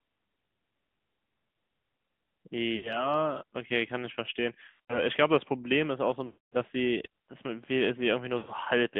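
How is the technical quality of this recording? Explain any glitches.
The technical quality is poor: the whole clip passes through the AMR narrowband mobile codec, and four bursts of lost AMR speech frames break it up.

Throughout, the speech is confined to roughly 150 Hz to 3.5 kHz, with nothing in the upper band. The voice sounds buzzy and synthetic because the codec rebuilds it from a vocal-tract model excited by sparse pulses rather than sending the waveform. The damage is plainly audible and points to a mid-rate mode around 10 kbps. A simple low-pass filter would dull the sound but would not leave this artificial, modelled texture.

Frame losses occur at 2.76–3.13 s (about 80 ms missing), 4.68–5.02 s (about 140 ms scattered over 200 ms, with the longest run about 80 ms), 6.26–6.56 s (about 260 ms) and 8.38–8.52 s (about 100 ms). In each case the decoder repeats its last good pitch and spectral settings at falling gain. 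The sound smears into a drawn-out warble, fades toward silence in the longest gap, and then returns rough. This gradual fade sets it apart from an abrupt dropout or click.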